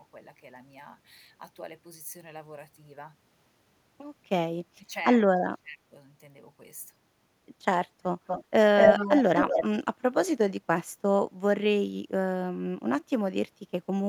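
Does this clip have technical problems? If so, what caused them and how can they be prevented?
Yes, there are two kinds of problem. First, speech suppressed in double talk: from 4.58 to 4.95 s and again from 5.45 to 5.94 s, the talker's level suddenly sinks by something like 20 dB, a bit deeper the second time. The likely cause is both ends talking at once, with the echo canceller unable to tell the local talker from loudspeaker echo and pulling everything down. Using a canceller with better double-talk detection, or a headset on the talker's end, would prevent it.

Second, echo leak: there's a delayed copy of the voice trailing by 237 ms. A short scrap at 8.27 to 8.44 s sits a little under the direct speech, and a longer stretch from 8.77 to 9.68 s is actually louder than the speech itself. That most likely comes from a far-end loudspeaker whose echo canceller let part of the playback back into its microphone. 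Headphones on that end, or a properly converged canceller with lower speaker volume, would keep it out.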